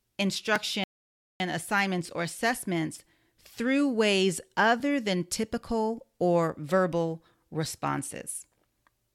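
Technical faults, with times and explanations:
0.56 s, block of digital silence: a gap of about 1.7 ms where the speech drops straight to silence and jumps back with no fade. The hole is far too short to hear as a pause, so what comes through is a brief tick or dip. This fits an output buffer that wasn't filled in time.
0.84–1.40 s, rebuffering stall: the speech halts for about 0.56 s, then picks up exactly where it stopped, with nothing skipped. The player ran out of downloaded audio and waited for more to arrive, so the pause adds time to the clip instead of replacing any. That is what separates it from the digital-silence block at 0.56 s: here the hole is long enough to hear as a pause.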